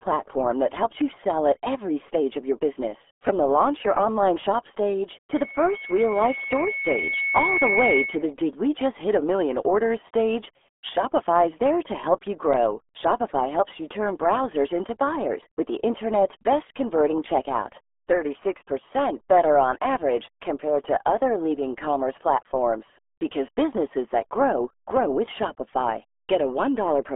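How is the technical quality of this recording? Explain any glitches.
The technical quality is poor. Two faults stand out: a heavy low-bitrate codec throughout and a loud feedback squeal early on.

The RealAudio 14.4 codec damages the whole clip. The speech is narrowed to a telephone-like band of roughly 300 Hz to 3.4 kHz. Nothing above about 3.6 kHz survives. That fits a RealAudio 1 stream at around 8 kbit/s, a speech codec built for dial-up modems. So few bits cannot describe the sound accurately. The voice comes out muffled and gargly, with heavy artefacts.

A loudspeaker feedback squeal runs from 5.31 s to 8.33 s. It starts just after "your online shop stage" and clears before "did we just hit". A microphone picked up the speaker it was feeding. At 2.2 kHz the loop gain went above one, so that tone fed itself. It swells over about two seconds into a steady squeal. At its peak it sits about 5 dB above the speech.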